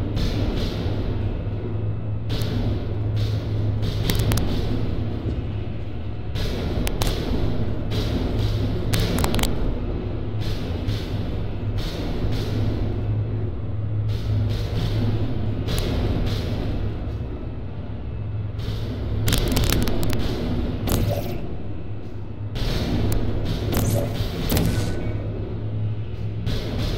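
From 19.33 to 19.83 s, integer overflow wraps peaks over the limit to the opposite sign: sharp cracks, sudden full-range waveform flips, and vertical broadband streaks.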